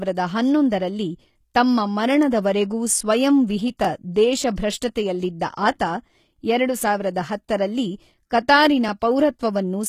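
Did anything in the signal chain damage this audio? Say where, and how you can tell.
Yes. The damage is at the codec stage and runs through the whole clip: plainly audible HE-AAC compression is the likely cause. The speech keeps treble up to about 14.9 kHz, yet that top band is rebuilt rather than original. Lower bands are copied upward and shaped by a coarse envelope, so harmonics fail to line up across the crossover. Plain low-bitrate AAC or MP3 would instead cut the treble off much lower. The damage fits a bitrate near 20 kbps.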